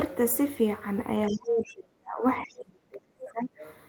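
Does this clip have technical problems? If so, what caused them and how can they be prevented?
Yes. The other side's voice leaks through at 1.28–1.4 s, 1.64–1.75 s and 2.49–2.54 s, faint at roughly 25 to 35 dB below the speech. The likely cause is incomplete echo cancellation of loudspeaker playback reaching the microphone. Headphones or a better-tuned echo canceller would prevent it.

Speech is suppressed in double talk from 1.28 to 3.63 s, for about two seconds in total, with drops of roughly 30 dB at the deepest. The likely cause is the echo canceller treating overlapping talk as echo and attenuating both. Using a canceller with reliable double-talk detection would prevent this.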